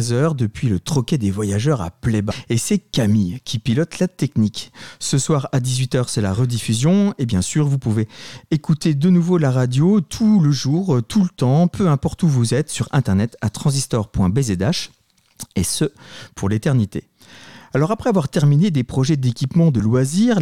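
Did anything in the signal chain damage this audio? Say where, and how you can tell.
Yes. Damaged data in a compressed stream at the codec stage causes brief blips at 2.30–2.32 s, 6.36 s, 12.12–12.14 s and 19.79 s, where corrupted frames make the decoder lose sync and resynchronise.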